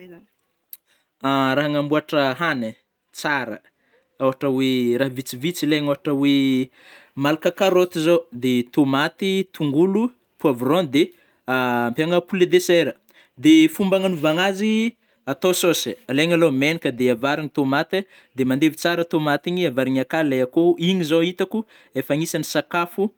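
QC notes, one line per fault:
No faults found in this speech recording.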